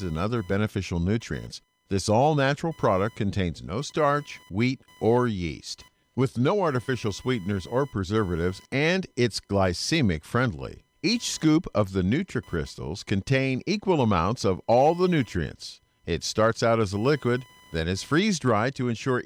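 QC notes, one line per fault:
Throughout, computer activity noise: a thin buzzing chirp pulsing at around 1 kHz sits roughly 35 dB below the speech. Shifting processor or peripheral load disturbs the ground shared with the audio circuit, so the interference follows the computer's activity, not the talking.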